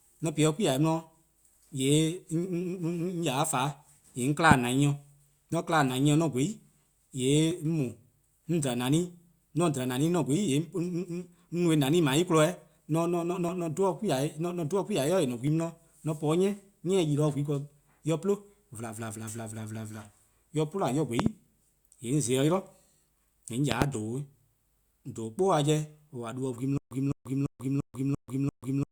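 Right at the start you get an overlap between stream segments: tiny clicks or skips at 1.53, 3.53, 5.52, 7.51, 9.50, 13.49 and 15.47 s. That roughly two-second rhythm fits the stream's segment length. Each time, the timestamps of neighbouring segments collided and the player trimmed off a few milliseconds of sound that was never actually duplicated, so the waveform jumps and the speech hiccups very briefly.

In among those, at 4.51 to 4.54 s, there's a single loud pop sitting about 20 dB above the speech. It's a sharp crack laid on top of the audio, and the talking carries on right through it underneath. The likely cause is a voltage spike in the chain, from static, a switch or a driver glitch, which the downstream circuitry then shaped into that short pulse.

The loud pops come back later as pairs: a double pop from 21.20 to 21.29 s, then another from 23.72 to 23.84 s, both again about 20 dB over the signal. 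Each pair is two quick thumps in a row, with the speech continuing beneath them, and they have the same electrical-pulse character as the first one.

From 26.78 s to the end there's a stutter with silent gaps. A chunk of about 0.21 s plays, then roughly 0.14 s of dead digital silence, and the cycle repeats every 0.34 s or so, six times until the clip runs out. The likely cause is the player stalling and replaying its last fragment on each retry before running dry. Whatever speech belonged in that stretch is simply gone.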